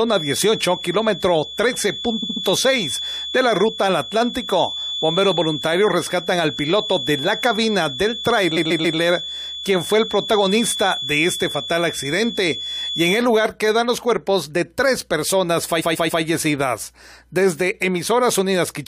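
From the start until 13.27 s, a thin, steady feedback whistle sits at 3.4 kHz, roughly 10 dB below the speech. It swells and fades slowly in level. It stops just before "lugar quedan los". The likely cause is a loudspeaker-to-microphone loop held right at the edge of feedback.

Repeated frames cause stutters at 2.22 to 2.43 s, 8.56 to 8.98 s, and 15.80 to 16.22 s. The last one follows "de tres personas". Each time, a short block of compressed audio plays three extra times. The first block is 69.7 ms long and adds 209 ms. The others are 139.3 ms and add 418 ms each.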